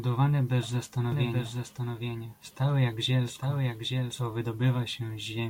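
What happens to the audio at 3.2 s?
At 3.2 s the speech is doubled: from 1.12 s to 4.26 s a second full-band copy trails about 0.7 s behind, around 5 dB quieter, likely from an edit or second capture path. Unlike an echo, it has no decay or room colour and starts and stops abruptly.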